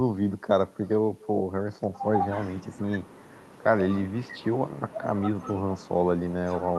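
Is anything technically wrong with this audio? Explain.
Yes. Throughout the speech there is an echo with no canceller: the far end's loudspeaker feeds its microphone and the speech returns around a third of a second later, about 28 dB down, as a faint, thin shadow trailing each phrase. The call-codec coloring, with highs rolled off near 12 kHz, fits a super-wideband Opus path.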